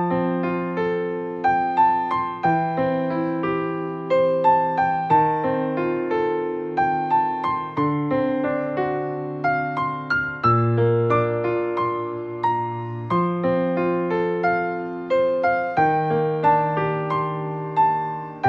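Nothing in this audio stands out as a technical problem. The sound runs without any audible interruption or damage.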